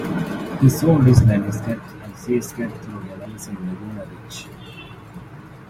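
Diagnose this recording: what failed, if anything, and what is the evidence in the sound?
Dropped buffer (overrun) at 1.88 s and 3.25 s: jumps where the speech skips ahead by a short slice, likely a driver buffer overwritten before it was read.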